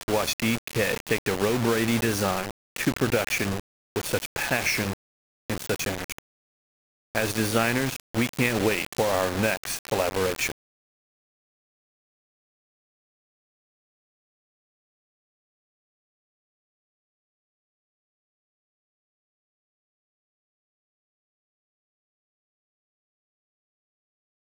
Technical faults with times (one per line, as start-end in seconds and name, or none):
0.00-24.44 low bit depth without dither